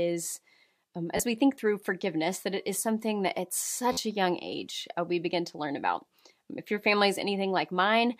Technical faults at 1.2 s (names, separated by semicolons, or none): repeated buffer